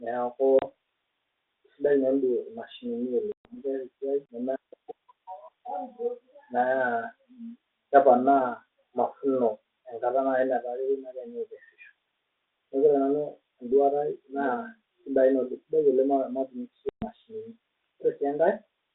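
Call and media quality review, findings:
Packet loss on ADPCM call, 0.59–0.63 s, 3.32–3.56 s, 16.89–17.06 s: hard-edged silences of 30, 130 and 130 ms on the G.726 32 kbit/s leg. Decoder predictor and step size lose sync with the sender. Speech returns slightly distorted, settling within tens of ms.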